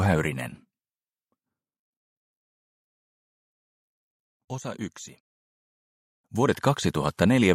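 From 6.08 to 6.61 s, zipper noise rides on a level change of roughly 10 dB, applied in unsmoothed steps about a hundred per second, ticking rather than gliding like a fader.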